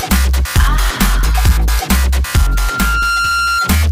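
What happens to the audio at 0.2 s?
Nothing goes wrong at 0.2 s; the audio is intact there, with no dropout, click or distortion at that moment.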